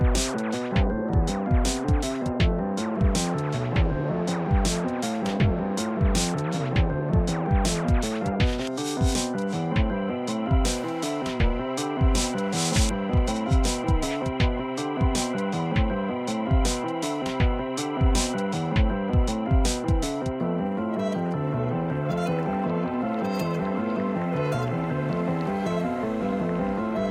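No faults heard anywhere in the audio.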